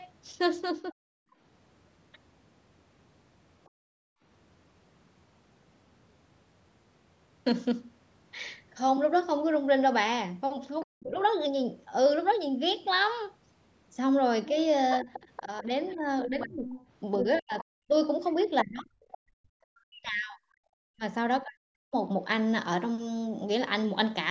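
Speech suppressed in double talk at 0.91 s: the voice dips sharply, by roughly 40 dB for about 70 ms, likely because the echo canceller heard both sides at once and turned everything down together.

Background gated by the echo canceller from 1.25 to 1.38 s: the room sound drops by about 18 dB while the loudspeaker plays, then springs back once the canceller releases the microphone.

Other side's voice leaking through at 3.65 s: a faint scrap of a second voice, roughly 40 dB under the talker, likely loudspeaker echo the canceller failed to subtract. Right after it, from 3.69 to 4.22 s, the background is gated again, dipping as far as about 36 dB for around half a second.

From 10.8 to 11.23 s the leaking voice returns, roughly 25 dB below the talker. Across 10.85 to 11.19 s the talker's speech is suppressed in double talk, losing roughly 40 dB at its deepest over about 300 ms, likely the canceller clamping down on both voices.

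From 14.47 to 19.18 s the leak is much stronger, roughly 15 dB under the talker. Speech suppressed in double talk runs from 14.52 to 21.95 s, with cuts of roughly 40 dB adding up to about four seconds. The talker is turned down while the other side speaks, likely because the canceller cannot separate the two.

Throughout, the call microphone processing leaves nothing above 8 kHz, which fits a 16 kHz sample rate.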